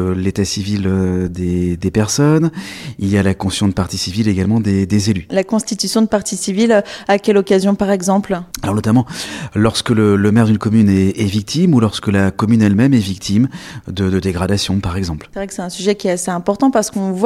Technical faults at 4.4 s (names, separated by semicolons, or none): none